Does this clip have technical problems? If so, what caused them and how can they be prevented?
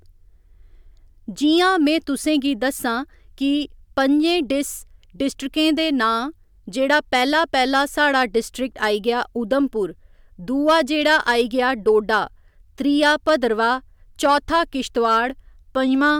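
Yes. Hard clipping runs through the whole speech clip. The level was pushed about 5 dB past what one stage could pass. Only a small fraction of peaks are cut flat. Their flat tops add high harmonics, heard as crackle. Lower the gain to leave headroom.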